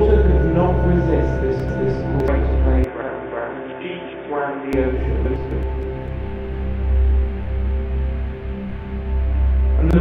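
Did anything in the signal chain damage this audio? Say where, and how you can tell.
Yes. From 2.84 s to 4.73 s the sound goes dull and boxy, with nothing above 3.6 kHz. The level drops by something like 10 dB, and a new noise floor comes in roughly 30 dB under the signal. There's no gap at either edge. That looks like an input switched to a poorer device, likely at the driver or device-routing stage, before the recording returns to the original input.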